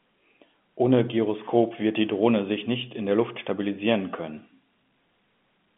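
No technical faults can be heard in this speech recording. It carries the narrow band of an ordinary telephone line, running from about 150 Hz to 3.5 kHz, as expected of G.711 A-law telephone coding at 64 kbps.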